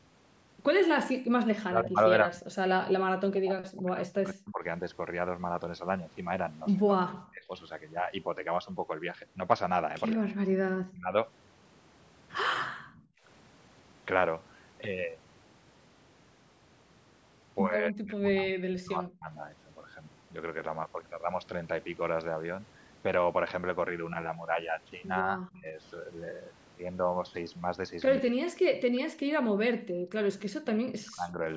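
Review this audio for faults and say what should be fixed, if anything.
Background gated by the echo canceller: at 1.14–1.3 s and 12.7–13.23 s the room sound drops by about 40 dB for about 150 ms and then about 500 ms while the far end plays. On a waveform the noise floor collapses to near-silence, and a spectrogram shows a blank vertical band. Prevent it with gentler canceller suppression and comfort-noise fill.

Speech suppressed in double talk: from 1.58 to 11.06 s, 17.77 to 19.31 s and 25.36 to 31.4 s the talker's speech is chopped and pulled down by around 40 dB, totalling roughly 4 s, 1.5 s and 3 s. This is likely the canceller attenuating everything while both sides speak. Waveforms show bitten-out chunks, and spectrograms show gaps and missing upper harmonics. Fix it with better double-talk detection that favours near-end speech.

Echo leak: at 10.11–10.15 s a faint, short copy of speech returns 158 ms late, far quieter than the talker. 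The likely cause is residual loudspeaker pickup slipping past the canceller. On a spectrogram it appears as a weak, smeared ghost of earlier harmonics. Prevent it by lowering speaker volume, using a headset, or letting the canceller converge longer.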